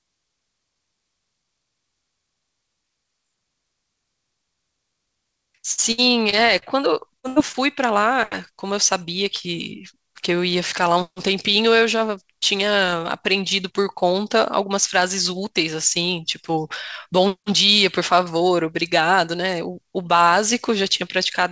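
From 5.72 to 6.64 s there is repeated packet loss, giving a robotic sound. Four gaps, the longest 63 ms, are patched by extending prior sound, so it turns choppy.

At 7.20 to 7.26 s comes short concealed packet loss. About 40 ms is filled by continuing the previous sound, heard as a brief smear or wobble.

From 7.28 to 7.38 s a burst of packet loss follows. About 80 ms goes missing. The last sound is held and faded, becoming a buzz or hiss before the audio resumes further on.

At 7.52 to 7.56 s another short concealed packet loss fills about 17 ms. Throughout, nothing is heard above 8 kHz, which fits a G.722 call path.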